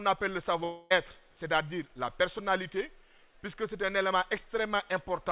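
A long network dropout runs from 0.64 to 0.92 s. At 0.64 s the incoming sound stops, and what follows is a buzzy continuation of the last moment that fades over roughly a quarter second without ever reaching true silence. The likely cause is that packets stopped arriving and the receiver filled the gap by extending what it last had. When audio resumes at 0.92 s, about 260 ms of material is simply missing, heard through the narrow G.711 call band with nothing above 4 kHz.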